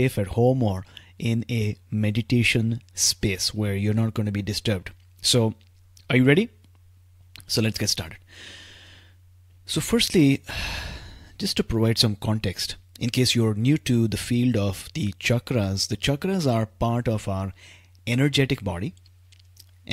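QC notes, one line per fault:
Nothing to flag here; the speech comes through without any trouble at all.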